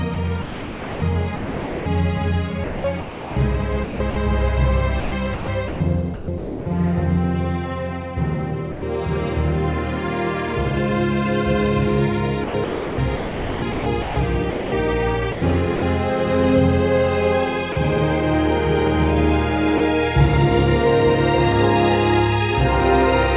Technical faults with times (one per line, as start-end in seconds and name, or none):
0.14-1.86 sound chopped by the voice detector
2.64-4.16 sound chopped by the voice detector
5.00-6.66 sound chopped by the voice detector
8.72-8.82 sound dropped by the voice detector
12.44-14.72 sound chopped by the voice detector
15.32-15.82 sound chopped by the voice detector
17.72-17.76 sound dropped by the voice detector
19.78 sound dropped by the voice detector